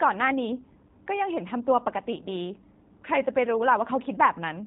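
Speech that sounds rough, slightly synthetic and muffled throughout, with nothing above 3.8 kHz, typical of G.729 codec coding, consistent with G.729A at 8 kbit/s.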